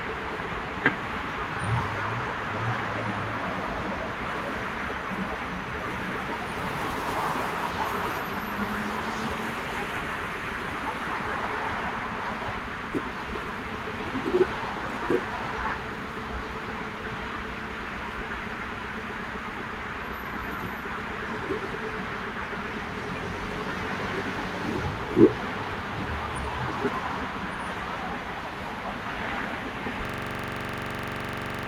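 At 30.05 s a system hang loop takes over and runs to the end: one 42.67 ms slice, which fits a 2048-sample buffer, repeats 38 times at 23.4 Hz while the device keeps cycling its ring buffer. It sounds like a rapid, rattling mechanical stutter.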